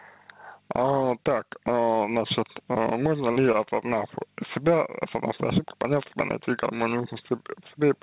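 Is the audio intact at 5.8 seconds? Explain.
No, gain pumping runs through the whole clip, including 5.8 s. The gain swings by about 10 dB, squashing loud and soft parts closer in level, likely from a fast limiter catching excessive gain.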